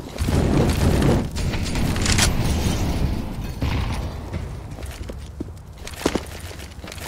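No technical faults can be heard anywhere in the audio.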